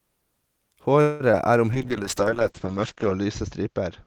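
A speech recording in which, from 1.01 to 1.22 s, the last sound is stretched into a fading buzz before the speech resumes where it stopped, a call audio freeze likely caused by delayed packets draining the jitter buffer and adding a gap of about 0.19 s. At 1.32 to 1.35 s a brief smear replaces about 20 ms of audio, short concealed packet loss filled by extending the preceding sound. From 1.73 s to the end the speech turns rough and muffled, a call bitrate drop from 32 to 8 kbps that narrows the bandwidth from 20 kHz to 8 kHz.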